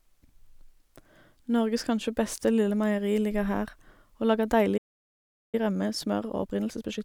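A playback stall at 4.77 s cuts this speech to silence for about 0.76 s until 5.55 s, most likely because the player ran out of data or its thread was blocked. Time-compressed catch-up follows from 5.55 s to the end: the player trims its backlog by cutting and cross-fading small pieces, so speech runs about 1.25 times fast at normal pitch.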